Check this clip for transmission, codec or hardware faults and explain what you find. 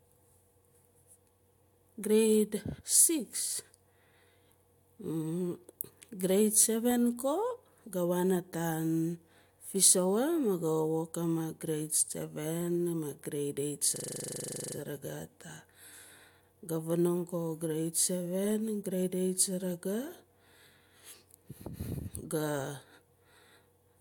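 There's one hardware-side fault, a system hang loop from 13.96 to 14.76 s. The machine stalls while the sound card keeps replaying its last 40 ms buffer, about 20 times. That's short enough to blur into a flat 25 Hz buzz in place of the speech, and the speech resumes without seeming to skip anything.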